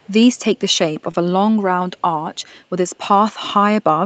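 From 0 to 0.13 s there is a very faint delayed copy of the speech, far below the direct sound and trailing it by about 191 ms. This is an echo leak, likely from a loudspeaker on the far end whose echo canceller let some of its microphone pickup slip back into the call. Unlike room reverberation, which smears continuously right behind the source, this is a discrete repeat at a fixed lag that appears briefly and then stops.

At 1.11 to 1.16 s, about 20 ms of audio never arrived in time. The receiver covered the gap with roughly 22 ms of concealment, carrying the preceding sound forward and then blending back into real audio. That produces a short concealed packet loss, heard as a tiny smear or wobble where a brief consonant can drop out. It differs from a dropout because nothing falls silent. The hole is papered over with a guess.

Within that same span, from 1.14 to 1.16 s, and again from 2.14 to 2.16 s, one 20 ms packet each time was lost and then rebuilt from error correction. 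The following Opus packet carried a low-bitrate copy, so there is no gap and no guessing. Instead, those frames come out momentarily rougher and noisier than the surrounding 40 kbps Opus audio, which itself stops at 8 kHz throughout. The rebuilt stretch sounds coarse but keeps the real content, where concealment would invent it.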